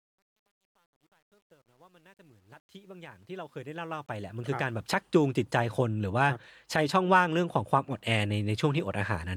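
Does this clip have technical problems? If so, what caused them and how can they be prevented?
Yes. Truncation distortion on a fade affects the fade-in, which reaches full level at 5.01 s. From 0.0 to 5.01 s, and worst before 3.41 s, the quiet part sounds gritty, which fits roughly 10-bit resolution. The waveform shows staircase steps, and the spectrogram shows broadband hash. To prevent it, process fades at high resolution and add dither before reducing word length.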